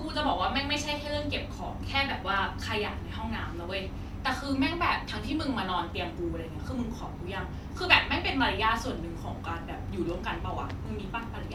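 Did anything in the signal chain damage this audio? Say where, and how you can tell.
No, nothing in the chain has left an audible mark on this speech, from the wiring and converter through to storage and playback.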